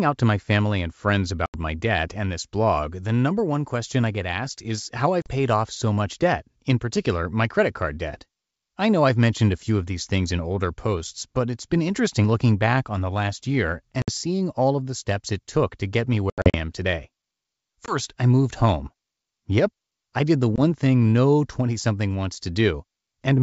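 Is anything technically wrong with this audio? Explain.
Yes: packet loss on an ADPCM call, at 1.46, 5.22 (after "get asked is how"), 14.02, 16.30 to 16.55, 17.86 (before "I moved home") and 20.56 s (after "I did the"). Lost audio becomes abrupt 20 to 80 ms silences, and the desynchronised decoder predictor brings speech back slightly distorted for a moment.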